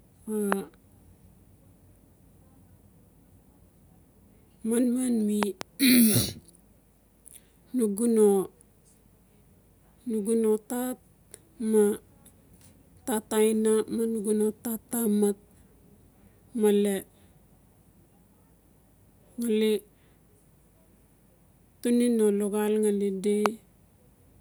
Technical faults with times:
0.52-0.54 loud pop
5.43-5.63 loud pop
23.46-23.48 loud pop

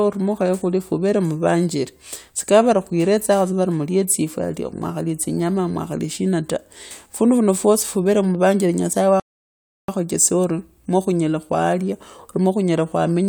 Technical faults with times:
9.20-9.88 rebuffering stall

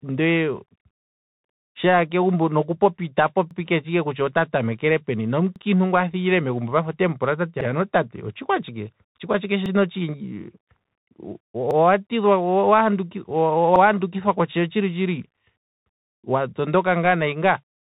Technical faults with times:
0.00-17.85 Bluetooth CVSD headset codec
3.51-3.56 overlapping chunks
5.56-5.61 overlapping chunks
7.61-7.66 overlapping chunks
9.66-9.71 overlapping chunks
11.71-11.76 overlapping chunks
13.76-13.81 overlapping chunks

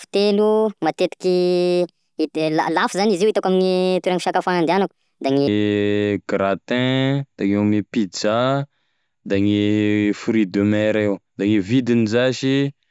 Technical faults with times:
0.00-5.48 wrong sample rate

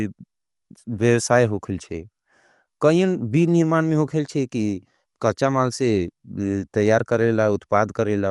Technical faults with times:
0.00-8.31 Dolby Digital compression

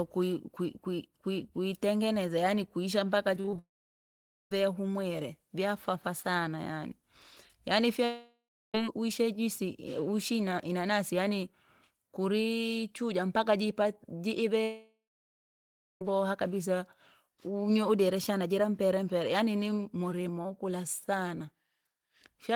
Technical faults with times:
3.35-3.59 repeated packet loss (robotic sound)
3.59-4.52 long network dropout
8.05-8.75 long network dropout
14.64-16.02 long network dropout

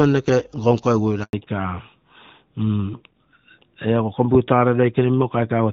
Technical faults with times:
1.23-1.33 handover gap
1.33-5.73 fallback to narrowband

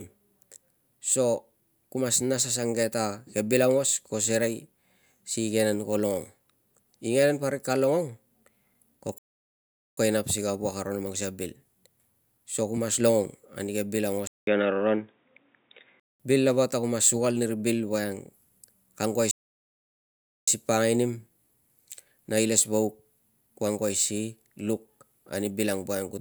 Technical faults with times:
9.18-9.98 playback stall
14.27-16.20 input switched to a poorer device
19.31-20.48 playback stall

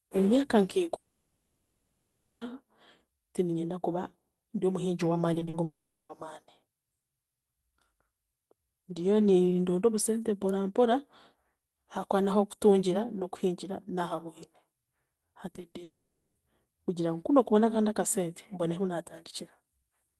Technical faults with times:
0.95-2.43 long network dropout
5.33-5.55 repeated packet loss (robotic sound)
5.63-6.11 long network dropout
15.55-15.75 short concealed packet loss
15.83-16.37 long network dropout

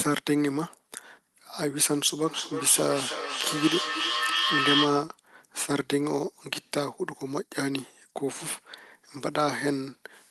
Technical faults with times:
2.26-5.06 feedback echo between two devices

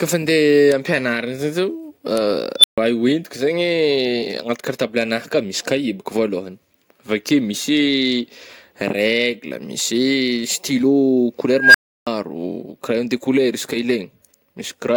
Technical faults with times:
2.59-2.78 unstable filter
11.54-12.07 unstable filter

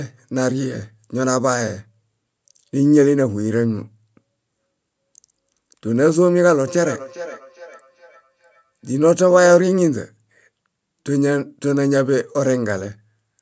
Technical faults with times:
6.67-9.60 feedback echo between two devices

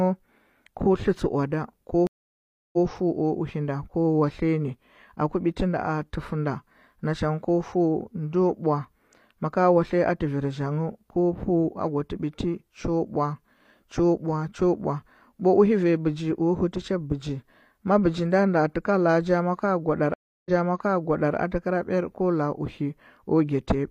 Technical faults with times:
2.07-2.86 stream reconnect
20.14-21.35 stream reconnect

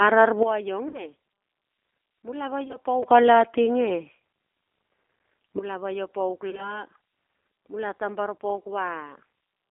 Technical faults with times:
0.00-9.71 G.729 codec
0.88-1.06 VoIP packet loss concealed by the speech codec
2.64-2.76 VoIP packet loss concealed by the speech codec
4.17-4.21 VoIP packet loss concealed by the speech codec
5.59-9.71 sudden gain jump
6.50-6.81 VoIP packet loss concealed by the speech codec
8.59 VoIP packet loss concealed by the speech codec

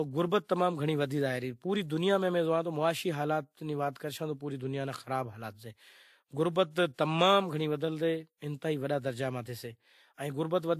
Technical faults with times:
0.00-10.79 transcoding between lossy codecs

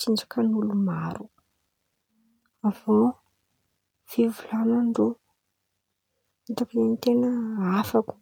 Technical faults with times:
6.58-8.22 sample clock jitter

